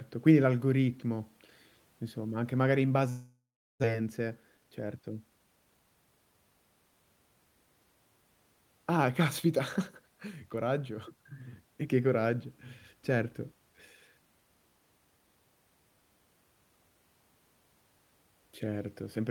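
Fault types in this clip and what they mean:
Long network dropout: from 3.09 s to 3.86 s the sound turns into a fading buzz and then about 0.4 s of silence, likely packets stopped arriving, with 0.6 s lost.
Jitter buffer speed-up: right after, from 3.93 s to 5.01 s, the receiver trims tiny pitch-period slices, about a tenth of a second in total, so speech runs at 109% and sounds rushed, though pitch holds.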